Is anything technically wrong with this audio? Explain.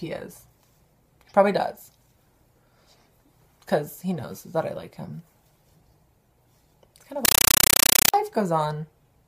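Yes. From 7.25 to 8.14 s, a compressed stream is played as audio. Undecoded AC-3 data is treated as samples. Bursts of about 8 ms repeat 31.25 times a second, giving loud chattering static.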